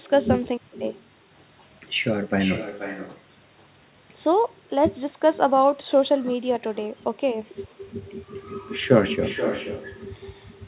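Throughout the speech, an echo with no canceller returns each phrase about half a second later, about 10 dB quieter. It sounds thin.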